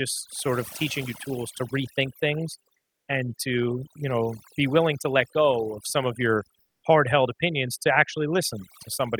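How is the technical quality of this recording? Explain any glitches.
The recording has two technical faults: noise reduction is too aggressive throughout, and the background is twice replaced by comfort noise.

Overdone noise removal runs through the whole speech clip. Frequency bands near the tool's noise estimate are pulled far down or switched off, taking low-level parts of the voice with them. The residual background breaks into twinkling, warbling specks, and the voice can come across watery or thin.

Comfort noise in place of the background appears twice. From 2.77 to 3.07 s (0.3 s), between "tools to rethink things" and "and to you know", and from 6.61 to 6.83 s (0.22 s), between "of some of your" and "hard held opinions to", the real background is swapped for smoother synthetic noise about 7 dB and about 6 dB quieter. This likely comes from discontinuous transmission such as Opus DTX, where the receiver fills a detected pause with generated noise.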